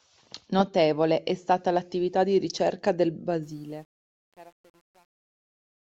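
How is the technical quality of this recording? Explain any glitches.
There's one real glitch, and it's on the ending. The speech fades out from around 3.4 s to the end at 5.82 s. From 3.43 s, right after "l'attività di ricerca del", you get truncation distortion on the fade. The level stage is dropping bits with no dither, and the steps it leaves fit something like 9-bit resolution. As the level sinks toward the smallest step, the waveform collapses into coarse square steps. From 3.81 s to the end it turns gritty rather than thinning out cleanly.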